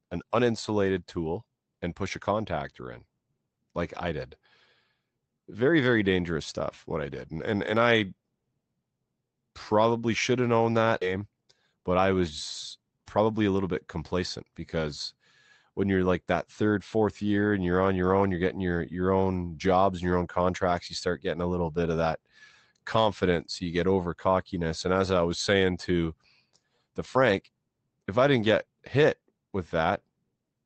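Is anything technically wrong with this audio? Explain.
Yes. This speech has a skip ahead and a jitter buffer speed-up, heard through a call codec whose band tops out around 8 kHz.

At 11.01 s the speech suddenly lurches forward, with roughly a second of talk gone and the two sides butted together with no gap. This is a skip ahead: the jitter buffer, holding audio that arrived late, discarded a chunk and jumped to newer material.

From 11.11 to 12.21 s the speech runs about 10% fast, and from 12.77 to 14.56 s about 11% fast, sounding hurried while the pitch stays put. This is a jitter buffer speed-up: after the backlog, the receiver trimmed tiny pitch-period slices repeatedly, shedding around a tenth of a second, then around two tenths, to cut its delay.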